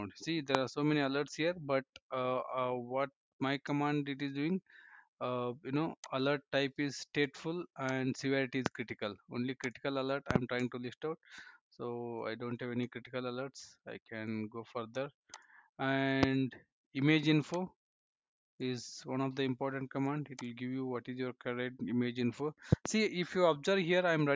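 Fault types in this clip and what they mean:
Loud pop: sharp transient thumps sit on top of the sound, which carries on underneath, at around 25 dB above it. Single pops occur at 0.55–0.57 s, 8.66–8.69 s and 16.23–16.26 s, and double pops in quick succession at 10.31–10.38 s and 22.73–22.88 s. Each is a brief voltage step or pulse, likely from a connector, switch, static discharge or driver glitch, shaped by the downstream circuitry into a short pop.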